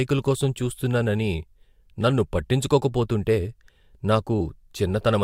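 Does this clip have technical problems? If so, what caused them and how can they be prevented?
Yes. Compressed frames skipped at 4.40 s: the speech jumps forward by roughly a single frame, about 20 ms of audio, because that frame was missing from the file or rejected by the decoder as damaged. Preventing it means storing and transferring the file with error checking, and verifying the container's integrity before playback or distribution.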